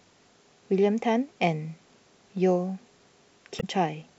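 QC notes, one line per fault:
3.57–3.64 s, damaged data in a compressed stream: a brief glitch of about 70 ms cuts through the speech as the decoder misreads corrupted frames and loses sync until it finds the next valid frame header.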